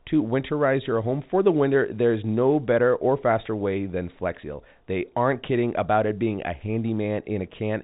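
Nothing is technically wrong with this speech clip, which carries the expected band-limit of G.711 telephone coding, with nothing above about 3.8 kHz.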